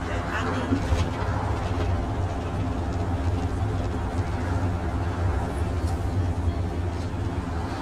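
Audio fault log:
Throughout, channel delay (comb filtering): one channel trails the other by around 10 ms, and when the two are summed to mono, content common to both cancels at regularly spaced frequencies, the first near 40 Hz. The result is a hollow, phasey tone. A spectrogram shows fixed horizontal dark bands at even intervals up the spectrum, unchanged over time. The mono waveform shows smeared, partly cancelled transients.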